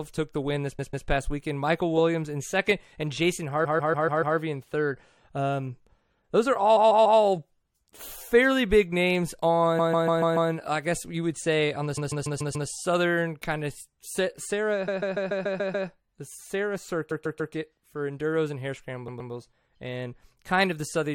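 Repeated frames hit the speech eight times: 0.78–1.07 s after "took the win this", 3.64–4.36 s, 6.76–7.19 s after "those are", 9.78–10.50 s between "fairly big names" and "I guess you would", 11.97–12.69 s, 14.87–15.88 s, 17.10–17.53 s and 19.07–19.31 s. The same 144 ms block (120 ms in the last one) gets replayed two to seven extra times, giving a machine-gun stutter that stretches each spot by up to a second.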